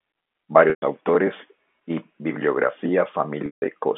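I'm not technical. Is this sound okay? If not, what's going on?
No. Two brief gaps come from packet loss with pitch repetition, at 0.70 to 0.82 s and 3.46 to 3.62 s. Pieces of the audio went missing, so the receiver repeated the last fragment of voice and faded it into silence before speech resumes with a short cross-fade.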